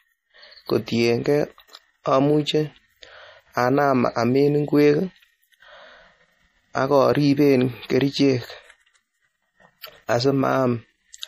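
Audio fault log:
Throughout, MP3 compression: the speech has nothing above 15.2 kHz, and plainly audible coding damage runs the whole length of the clip. The likely cause is an MP3 encode with too few bits, a level of damage that fits a low rate around 40 kbps. Short of bits, the encoder drops the top of the spectrum at a fixed point and discards weak frequency components. That removes the air from the voice and leaves the coding damage clearly audible.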